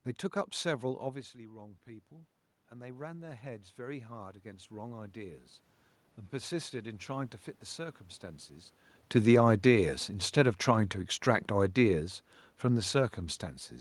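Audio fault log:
0.97–5.53 s, automatic gain rising: after the talker moves back around 1 s, the input level falls by about 15 dB, and the gain control slowly adds about 11 dB. Voice and room noise swell together over several seconds, so the background rises with the speech.
9.11–12.11 s, automatic gain falling: following another talker movement near 9 s, the gain control judges the input too loud, or its background noise too strong for its gain, and pulls its gain down by about 4 dB over three seconds. Speech and the room noise beneath it sink together.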